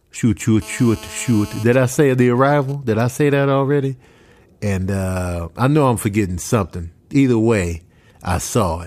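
From 0.62 to 1.63 s a hard, raspy buzz at 217 Hz, thick with harmonics, sits under the speech at about 19 dB below it, ignoring the speech entirely. This is GSM phone buzz: a nearby 2G phone in a call pulses its transmitter 217 times a second, and the audio circuitry rectifies those radio bursts into sound.

Right after, from 1.66 to 2.75 s, the steady drone breaks into even ticks with a longer 217 Hz buzz twice a second, quieter, roughly 25 dB below the speech. These are GSM signalling bursts: with its user silent during the call, the phone sends only short groups of bursts, which the circuit again rectifies.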